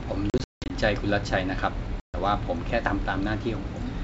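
Packet loss on an ADPCM call strikes twice. From 0.30 to 0.74 s, around fifteen packets vanish, 280 ms in all, scattered across 400 ms with a longest gap of 180 ms. At 2.00 to 2.15 s, about seven more drop, 140 ms. Each gap becomes hard-edged silence. Then the decoder's predictor and step size no longer match the sender's, so the speech comes back slightly distorted before settling. The wideband sound carrying this fits G.722 at 64 kbit/s.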